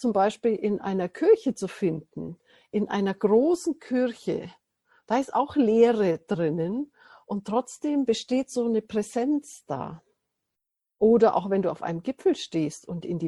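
From start to finish the audio carries plainly audible MP3 compression damage, likely from a low-bitrate encode; the degree of smearing fits something around 64 kbps. With too few bits, the encoder discards the top of the spectrum and drops quieter frequency lines, which then flicker in and out between frames. The result is a dull, watery, swirling texture, with metallic chirps on bright sibilant or cymbal-like content and softened, smeared transients.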